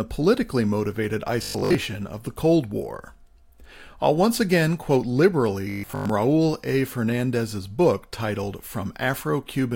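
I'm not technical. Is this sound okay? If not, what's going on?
No. Around 1.43 to 1.75 s, right after "politically motivated", and again around 5.70 to 6.12 s, the speech turns into a rigid, metallic buzz. This is robotic sound from repeated short buffers, likely caused by the audio software repeating tiny 20 ms slices while most of the real sound is skipped.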